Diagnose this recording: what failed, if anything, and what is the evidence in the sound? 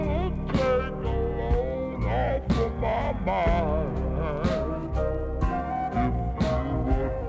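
Wrong sample rate at playback: throughout, the sound runs at 0.667 speed and 7 semitones low, which fits 24 kHz material clocked out at 16 kHz.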